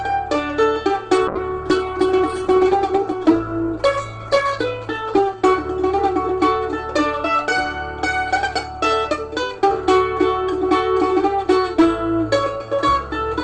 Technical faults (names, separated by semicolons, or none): call bitrate drop